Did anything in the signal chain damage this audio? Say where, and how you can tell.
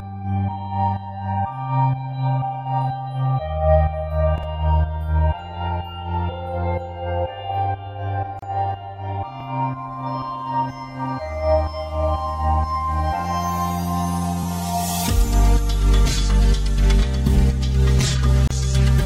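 Yes. Channels drifting apart at the converter stage: separate clocks, roughly 200 ppm apart, slide the delay to about 5 ms. Summed to mono, it's a slow flange throughout.

Overlapping chunks in the buffer stage: stutters at 4.38, 9.41 and 14.43 s. Each 5-second chunk replays 25 ms of its predecessor's end.

Gap at a join of encoded pieces, from the codec: gaps of 32 ms at 8.39 s and 31 ms at 18.47 s. Untrimmed encoder delay and padding remain.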